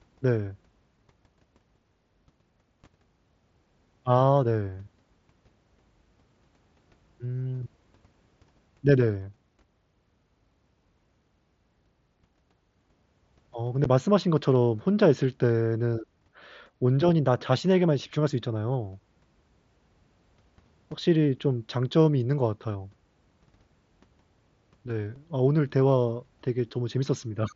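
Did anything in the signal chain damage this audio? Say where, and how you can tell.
Yes. Blocks of digital silence at the driver or buffer stage: at 13.84 s a 10.7 ms dip, fitting a 512-sample buffer, and at 25.16 s a 2.7 ms tick, fitting 128 samples. The output likely wasn't filled in time, so the waveform drops to silence with abrupt edges, and the spectrogram shows thin vertical blank stripes.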